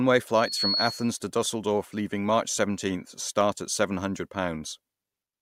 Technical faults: loudspeaker feedback squeal

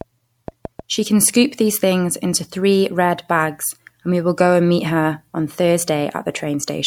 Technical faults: train of clicks

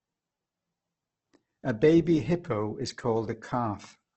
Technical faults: Opus compression

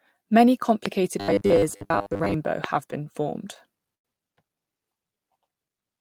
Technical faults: loud pop; robotic sound from repeated short buffers; short stall from a late packet

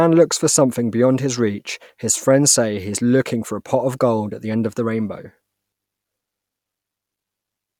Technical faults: none

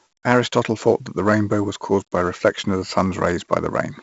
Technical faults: 4-bit ADPCM compression

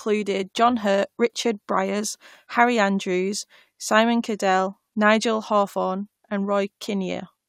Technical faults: none

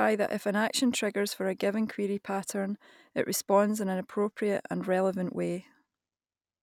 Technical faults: none

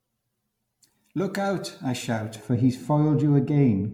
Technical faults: generation loss; de-emphasis applied wrongly

